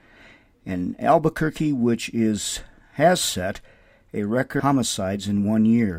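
A speech recording with a likely stream segment skipped: one piece of the segmented stream appears not to have loaded, and the player carried straight on with the following segment instead of waiting. Just after "is has set a", at 4.59 to 4.62 s, the sound breaks with a brief blip and resumes further along, so part of the programme at that point is absent and the speech jumps ahead abruptly rather than continuing smoothly.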